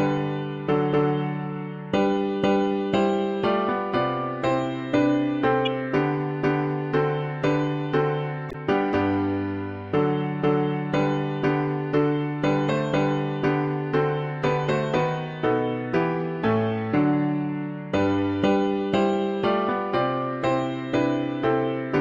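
Damaged data in a compressed stream appears at 5.65 to 5.68 s and 8.49 to 8.55 s: corrupted frames make the decoder lose sync and resync, leaving brief blips.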